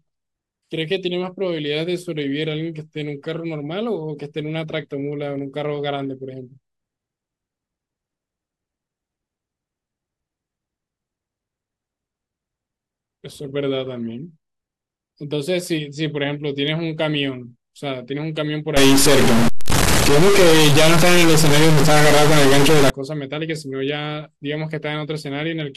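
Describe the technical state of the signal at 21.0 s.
At 21.0 s the speech is inside a stuck-bit fault running from 18.77 s to 22.9 s. One bit of each sample seems fixed at a single value, so roughly half the samples land off by a step of about -10 dBFS, a fairly high bit, likely from a broken data line or converter. The speech takes on a harsh, buzzy distortion, and because the error flips with the sign of small values, quiet gaps fill with loud noise.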